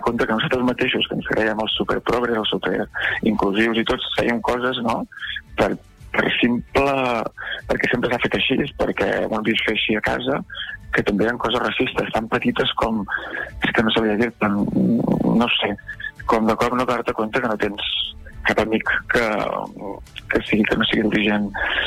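From 0.54 s to 21.37 s a click recurs every 0.905 s, about twenty times, likely from clock drift buffer slips: two clocks disagreeing by roughly 200 ppm force a few samples to be dropped or repeated. A spectrogram shows evenly spaced thin vertical lines, and the waveform shows small steps.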